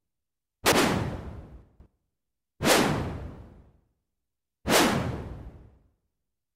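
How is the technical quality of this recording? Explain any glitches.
Two short glitches disturb the technical quality of these everyday sounds, both from chunks out of order. At 0.66 to 0.78 s and again at 1.62 to 1.86 s, a roughly 60 ms piece of audio reached the output late, one chunk behind at first and three behind later, and played after material that should have followed it. Nothing is missing, but the hard joins produce a brief jumbled stutter.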